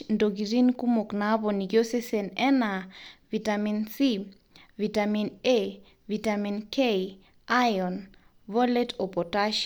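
No technical faults can be heard anywhere in the speech.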